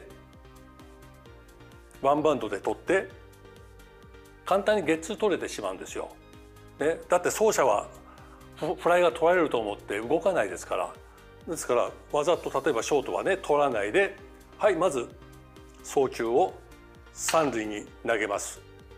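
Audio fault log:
Nothing stood out on listening.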